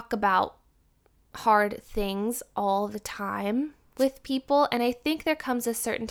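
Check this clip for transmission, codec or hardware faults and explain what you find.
One fault is present, a wireless microphone noise hit from 3.97 to 4.05 s. The analogue FM radio link faded briefly as reflected signals cancelled at the receiver, so receiver noise rose over the speech for about 80 ms. It is heard as a short swish of static.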